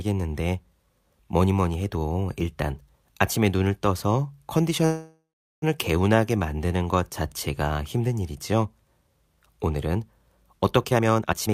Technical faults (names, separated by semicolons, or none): call audio freeze; jitter buffer speed-up